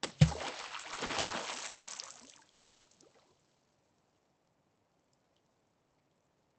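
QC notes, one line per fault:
0.57–1.32 s, repeated stalls (stutter): the sound keeps catching and dragging through seven short gaps, the longest 110 ms and 250 ms in all, about a third of that stretch. Late packets left the jitter buffer empty, so the receiver kept stretching the last sound to fill in.
1.68–1.89 s and 2.51–2.87 s, call audio freeze: the sound hangs for 190 ms and then 340 ms, held as a fading buzzy continuation rather than dropping to silence, before it picks up where it left off. Packets held up in transit most likely emptied the buffer.
5.35–6.57 s, jitter buffer speed-up: the sound runs at about 114% of normal speed with the pitch unchanged, so it feels hurried. The receiver trimmed out roughly a fifth of a second in many tiny pitch-period chunks to work off the extra delay it had built up.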